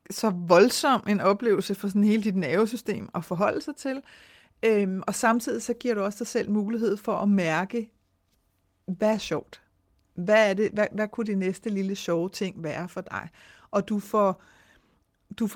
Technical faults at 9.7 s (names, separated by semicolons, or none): none